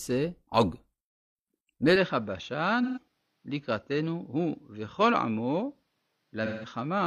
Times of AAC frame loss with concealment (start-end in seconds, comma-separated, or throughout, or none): 2.83-2.98, 6.45-6.69